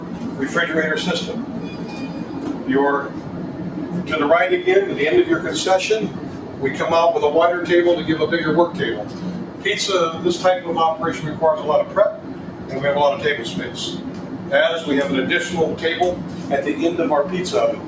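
Across the whole clip the level rises and falls by around 10 dB as the sound pumps, flutters or thins. A noise suppressor applied to music or sounds, built for speech, treats steady tones, ambience and reverb as noise and pulls them down while attacks pass through.

Sound cut by the noise suppressor shows up as sinking held or decaying sound at 0.00–0.39 s, 1.53–2.67 s, 3.09–3.61 s, 6.14–6.62 s, 9.04–9.65 s, 11.87–12.72 s and 13.97–14.51 s, each dipping by up to about 5 dB. At 16.23–16.44 s the dip is about 4 dB. Each time the suppressor mistook the sound for noise and cut it harder than its surroundings, shortening tails. The call microphone processing leaves nothing above 8 kHz.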